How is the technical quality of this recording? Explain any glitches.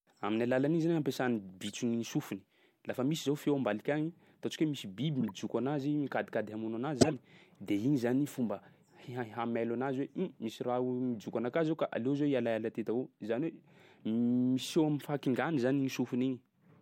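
The speech has three short glitches, all corrupt frames that were decoded anyway: at 1.66–1.72 s, just before "ny sofiny"; 5.21–5.31 s, after "hoe misy biby"; and 6.99–7.14 s, between "mikadikady hamono anazy" and "de igny zany fomba". Each spans a few codec frames. Flipped bits gave wrong gains and codes, so energy lands at unrelated frequencies, heard as a chirp, squeak, blip or burst of noise, the last and loudest near -10 dBFS. Lost frames would leave a gap or smeared repeat instead.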